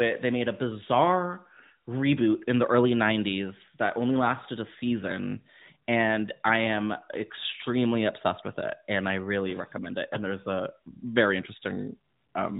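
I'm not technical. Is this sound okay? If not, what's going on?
Yes, there's nothing wrong with this sound.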